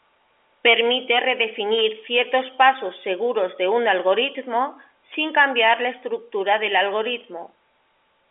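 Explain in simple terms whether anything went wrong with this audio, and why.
Nothing went wrong here: the speech has the slightly thin, boxy quality of an ordinary landline call, because it was carried by standard G.711 telephone coding, which keeps only the middle range of the sound and drops everything above about 3.6 kHz, and that is simply how a normal phone line works.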